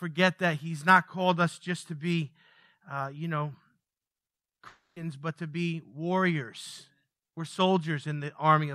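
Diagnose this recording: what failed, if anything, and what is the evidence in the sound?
At the network stage, the speech breaks off at 4.67 s and does not resume until 4.97 s, just before "but to be warriors". For about 0.3 s the last sound is stretched into a fading buzz, and the final 160 ms or so is silence. The returning speech skips over what was lost. This is most likely a long network dropout: packets stopped arriving and the receiver's concealment padded the gap. On a spectrogram, a smeared, repetitive harmonic band decays into an empty strip. On the waveform, the envelope tapers to flat before the speech restarts abruptly.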